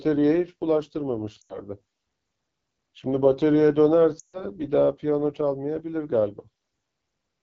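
Throughout the recording the speech passes through the AMR wideband (HD Voice) codec at a low rate. The roughness points to about 8.85 kbit/s, one of the two lowest settings. At that rate the pulse-driven vocal tract model has too few bits to describe the excitation, so the speech sounds plainly rough and raspy. The top band is filled with shaped noise rather than real detail.

From 1.41 to 1.60 s, lost AMR speech frames cut out about 80 ms of audio, which fits four failed 20 ms frames. The decoder repeats the last good pitch and vocal tract settings at falling gain, so the sound drops to near silence within two frames. From 4.19 to 4.44 s a longer run of about 140 ms falls to near silence before the speech returns, briefly weak or rough.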